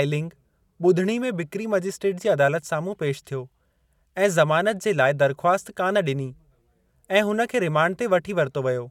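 A short bit of speech, and nothing technically wrong turns up anywhere in it.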